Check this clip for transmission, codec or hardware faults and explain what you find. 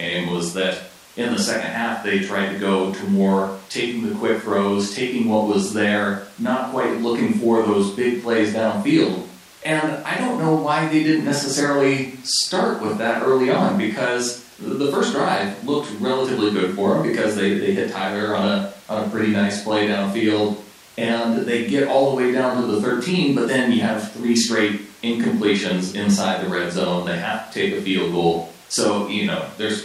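Nothing in the speech signal points to a transmission, codec or hardware problem; it arrives continuous and intact, with no disturbance that a listener could trace to the path it travelled.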